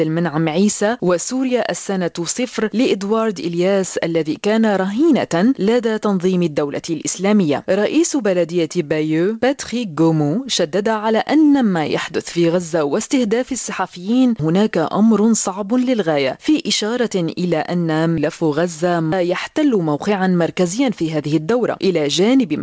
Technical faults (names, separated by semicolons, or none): clock drift between sender and receiver; repeated timing corrections